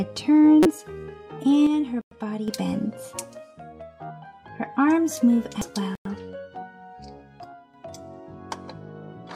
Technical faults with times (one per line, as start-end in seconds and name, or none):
0.63-0.66 damaged data in a compressed stream
1.67-2.48 one channel drops out
2.01-2.11 gap between chunks
5.61 damaged data in a compressed stream
5.95-6.05 gap between chunks
7.44-7.74 one channel drops out